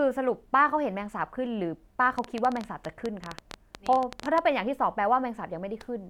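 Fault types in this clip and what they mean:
Train of clicks: a run of short, similar pulses laid over the speech from 2.19 s to 4.39 s, about 11.4 per second at an uneven spacing, roughly thirty clicks in all. They peak around 10 dB above the speech, so they cut through clearly as ticking, including in the gaps between phrases. The likely cause is interference coupling in from nearby equipment or a faulty connection or power supply.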